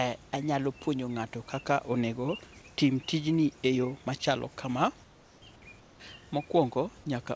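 Comfort noise in place of the background, likely from discontinuous transmission, fills pauses at 5.04 to 5.42 s and 5.80 to 6.00 s with featureless hiss about 2 to 3 dB quieter.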